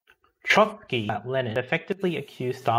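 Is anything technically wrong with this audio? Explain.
Yes. Compressed frames are skipped at 1.09 s and 1.56 s. The first jump drops roughly 700 ms, the second roughly 400 ms, in whole 92.9 ms frames that were missing or rejected as damaged. At each join the speech jumps abruptly ahead.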